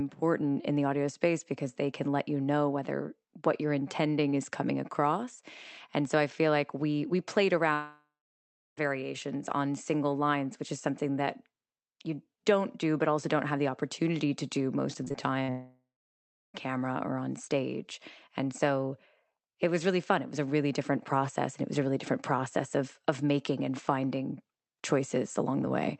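At 7.73 s the speech cuts out until 8.79 s, about 1.05 s. This is a long network dropout, likely from a network outage. The last sound is carried on as a fading buzz. The final 0.66 s or so is left as silence, and the speech resumes with roughly a second of material missing.

From 15.05 to 15.50 s there is repeated packet loss, heard as a robotic sound. Five short holes, the longest about 53 ms, are each patched by extending the preceding sound. Around a quarter of this half-second is concealed, which makes the speech choppy, with fragments gone.

It runs straight into a second long network dropout from 15.50 to 16.68 s, about 1.18 s long, again likely from a network outage. There is a similar fading fill, then about 0.67 s of silence before the speech returns with the lost portion absent.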